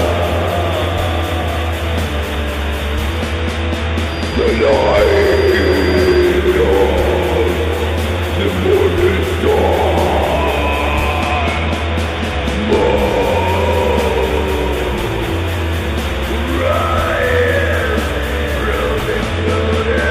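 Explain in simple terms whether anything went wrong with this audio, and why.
A feedback whistle appears from 4.02 to 6.34 s: a thin, steady high tone at about 4.8 kHz sits well below the main sound, slowly swelling and fading in loudness. The likely cause is a loudspeaker feeding back into the microphone. The sound goes round that loop, and at this one pitch it comes back nearly as strong as it left, so it keeps ringing without growing into a full howl.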